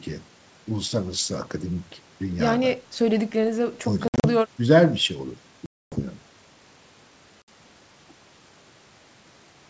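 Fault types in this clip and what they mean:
Packet loss on an ADPCM call: Stretches of audio drop out and are replaced by hard-edged silence. The receiving decoder's adaptive predictor and step size then drift out of step with the sender's. So the sound comes back slightly distorted, then settles within tens of milliseconds. Gaps fall at 4.08 to 4.25 s (120 ms lost in several short bursts), 5.66 to 6.03 s (260 ms) and 7.42 to 7.49 s (60 ms).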